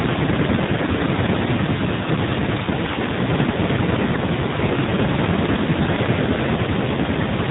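Throughout the clip, the speech carries the sound of the AMR narrowband mobile codec. Nothing passes above 4 kHz, and the voice has a buzzy, synthetic edge because it is rebuilt from a coarse vocal-tract model and a few excitation pulses. The damage is plainly audible, which fits a low mode of about 7.4 kbps. Plain band-limiting would sound muffled but not buzzy.

From 3.52 to 3.56 s, a lost AMR speech frame causes a brief dip or warble. The decoder filled the gap by repeating the previous pitch and vocal-tract settings at falling gain, which fits a single missing 20 ms frame. Unlike a dropout, there is no silent hole or click, just a smeared, fading moment before the voice returns weak or rough for a moment.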